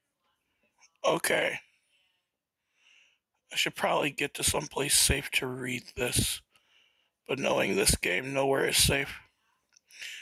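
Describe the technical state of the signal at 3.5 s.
At 3.5 s the signal shows gain pumping, which runs through the whole clip rather than starting or stopping near this point. The level is likely being driven far too hot into a fast limiter or compressor that clamps down on each loud event and then releases. The gain is pulled down under every loud sound, swinging by around 10 dB. On a waveform the peaks look flattened and evenly squashed, with the quiet stretches between them rising. A spectrogram shows the level dimming and recovering in step with the loud events.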